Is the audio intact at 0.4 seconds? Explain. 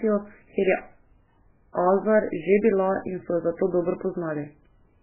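No. The whole clip, including 0.4 s, is likely heavy MP3 compression at a very low bitrate, pointing to around 8 kbps, which strips everything above 3 kHz and leaves the speech watery and swirling.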